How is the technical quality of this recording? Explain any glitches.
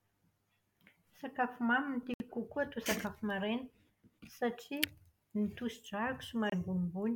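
The speech is interrupted twice by brief dropouts, at 2.14 to 2.22 s (about 62 ms of silence) and 6.50 to 6.54 s (26 ms), each cutting out and resuming. These are likely Bluetooth stalls: delayed packets emptied the playback buffer until resent data arrived.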